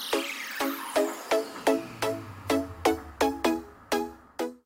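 No technical faults can be heard anywhere in the audio, and the signal holds steady throughout.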